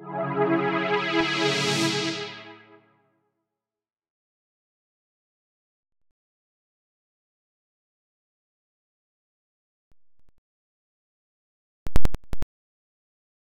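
Corrupt FLAC frames appear twice: 9.92 to 10.38 s, a faint disturbance peaking near -46 dBFS, then 11.87 to 12.43 s, a much stronger disturbance reaching about -6 dBFS. Flipped bits went unchecked, so prediction ran on wrong values until intact frames restored clean sound.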